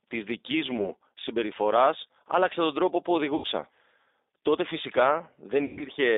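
The whole clip runs through the G.729 codec at 8 kbit/s, so the speech is rebuilt from a filter, a pitch predictor and sparse pulses. It's band-limited to about 300 Hz to 3.7 kHz and sounds plainly rough and a bit synthetic.

Then there's VoIP packet loss concealed by the speech codec, three times. At 0.77–0.93 s a 20 ms gap and at 3.36–3.46 s an 80 ms gap get patched by the decoder repeating its last pitch and filter, so the sound smears into a fading buzz or coloured noise. At 5.65–5.85 s about 140 ms goes missing, mostly in one 120 ms run, and the speech stays weak and distorted for a moment after the audio resumes.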